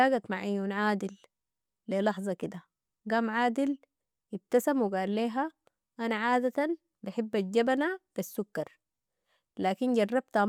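Nothing stood out as a technical fault on listening to this speech recording.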